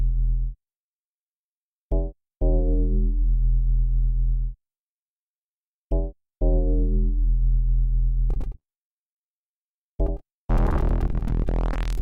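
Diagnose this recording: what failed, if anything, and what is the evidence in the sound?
Repeated packet loss (robotic sound) on the network, 8.30 s to the end: dozens of gaps up to 29 ms, each patched by extending the preceding sound, turning it choppy with pieces missing.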